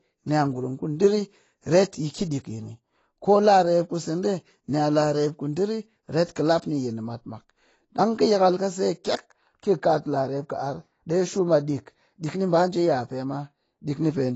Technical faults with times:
0.00-14.35 AAC compression

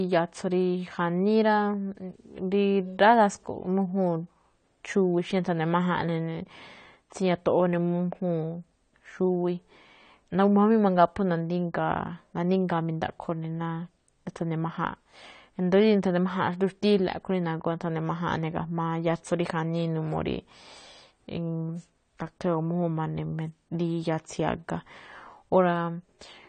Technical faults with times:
0.00-26.49 AAC compression
1.47-3.61 video or display buzz

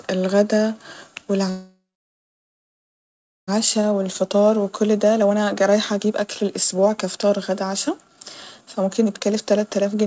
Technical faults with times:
1.50-3.49 call audio freeze
3.58-10.06 jitter buffer speed-up

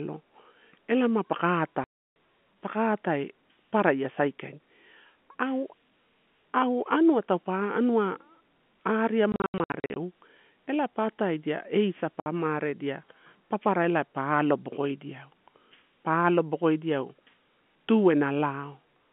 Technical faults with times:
1.84-2.13 packet loss filled with silence
9.32-9.96 packet loss filled with silence
12.20-12.26 packet loss filled with silence

